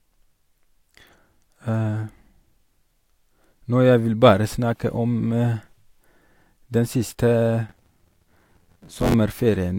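Buffer tearing runs from 7.69 to 9.15 s: the writer and reader of the playback ring buffer have slipped, so roughly a third of each period replays speech from around 40 ms earlier. The hard joins produce a robotic 86.1 Hz rattle, which fits a 512-sample buffer.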